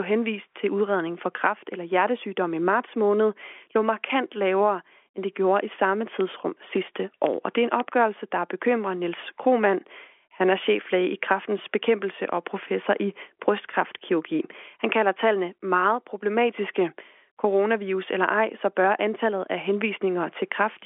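No technical faults are audible.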